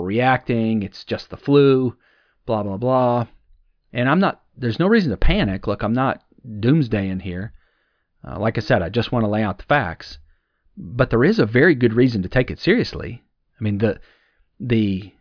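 No technical faults can be heard anywhere in the recording, so there is nothing to place in time or trace to a cause.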